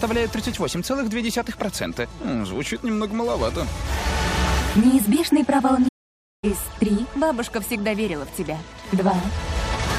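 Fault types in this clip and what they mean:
Playback stall: the sound halts mid-flow at 5.88 s and stays silent for 0.54 s, resuming at 6.44 s, likely because the player ran out of data or was blocked. Waveform: a flat line; spectrogram: a blank vertical band.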